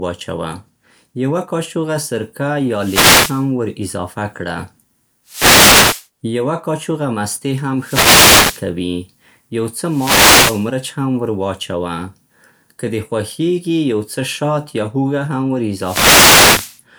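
Bursts of hissing static swish over the speech at 2.7–3.5 s, 5.26–6.07 s, 7.78–8.67 s, 9.84–10.73 s and 15.74–16.82 s, each under a second or so. These are wireless microphone noise hits: the FM radio link fades as reflections cancel, and receiver noise swells over the voice.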